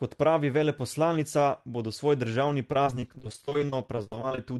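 A speech clip that falls apart near the end: from 2.72 to 4.38 s, right after "veleposlanica bodo svoj državni", it goes choppy and robotic. That's repeated packet loss, with dozens of short holes, the longest around 43 ms, each patched by stretching the previous sound, so about a third of that stretch is concealment rather than real audio. It's riding a call path whose top end stops at 12 kHz, which fits Opus at around 32 kbps.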